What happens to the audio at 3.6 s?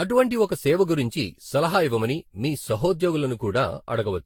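At 3.6 s you're hearing the same generation loss that runs through the whole speech clip. The sound is swirly and hollow, with smeared, blurred attacks and a top end that stops around 18 kHz. That's more damage than a single pass at roughly 70 kbit/s would cause. It's likely the result of repeated Vorbis decode-and-re-encode cycles, something like seven of them, each quantising on a shifted frame grid so the noise and spectral holes pile up.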